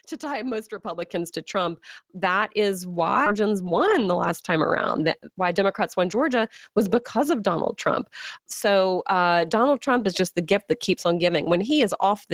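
At 1.02 s the whole signal, voice and background alike, jumps up by about 5 dB in one step. This is a microphone volume stepped up: the call software judged the input too quiet and raised the device's gain at once, mid-stream.

At 3.26 s the speech lurches forward with no gap, and about a third of a second is simply gone, its two sides butted together. This is a skip ahead: a stretch of audio was discarded while later audio was already queued, so playback jumped past it.

From 3.35 to 4.10 s the speech runs about 8% fast, and from 4.98 to 5.80 s about 6% fast, sounding slightly hurried without any change in pitch. This is jitter buffer speed-up: with too much audio held, the receiver repeatedly cut out short pitch-period pieces, trimming roughly 70 ms and 50 ms to reduce delay.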